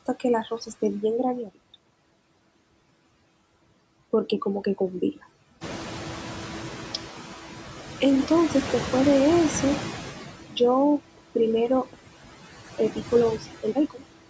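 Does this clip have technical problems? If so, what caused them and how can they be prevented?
Yes. Noise suppressor artifacts run through the whole clip. Steady background is pulled down by about 15 dB. A gentler suppression setting would prevent it.

The noise suppressor is catching up from 5.61 to 7.05 s. Room noise jumps about 13 dB near 5.5 s. The suppressor lets it through with only about 7 dB cut for 1.44 s while its estimate adapts. A faster-adapting noise estimator would prevent it.

A time-compressed catch-up runs from 12.78 to 14.29 s. The player recovers from a stall by splicing out small pieces, so the speech plays 1.5 times faster at normal pitch. A larger jitter buffer would prevent it.

Speech is cut by the noise suppressor between 13.62 and 14.02 s. Quiet sounds totalling about a tenth of a second drop by up to about 13 dB and sound swallowed. A less aggressive suppressor that protects speech would prevent it.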